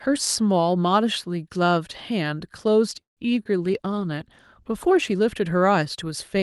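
At 3.01 s the speech stalls for about 0.17 s. The last sound carries on briefly as a fading buzz and then drops to near-silence for roughly 0.15 s, before the talker picks up exactly where they left off, with nothing missing. That's a call audio freeze, likely from packets getting held up in transit so the jitter buffer ran dry. The receiver stretched out what it had and then waited, which inserts a gap rather than losing any speech.

Then at 3.43 s there's a quick smear lasting about 40 ms. It's short concealed packet loss: roughly 20 ms of audio never made it to the decoder in time, so the receiver continued the previous sound to cover the hole and blended back into the real signal. You hear it as a tiny wobble in the speech rather than a clean dropout.

From 3.63 s to 5.22 s the speech turns rougher and more watery, with the top end dulled compared with the rest of the call. Up to that point Opus comes through with its usual light coding texture and a ceiling around 12 kHz. 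That's a call bitrate drop. The call's bandwidth estimate fell and the encoder was pushed to far fewer bits, and the sound fits a drop from about 64 kbps to around 18 kbps, sitting at the low point for about 1.5 s before recovering.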